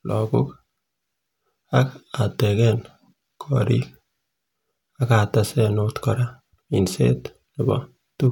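No technical faults are audible anywhere in the speech.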